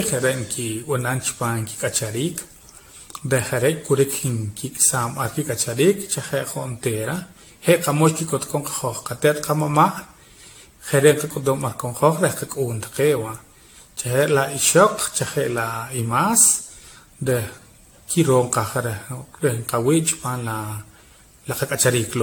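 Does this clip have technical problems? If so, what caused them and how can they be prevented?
Yes. Throughout the speech the sound is swirly, smeared and hollow, with blurred attacks and nothing above 18.7 kHz. This is likely generation loss from repeated lossy re-encoding, roughly ten passes, which fits AAC-LC at about 96 kbit/s. Each pass requantises on a shifted frame grid, compounding the noise and spectral gaps. To prevent it, keep a lossless master and encode to a lossy format only once, at the final step.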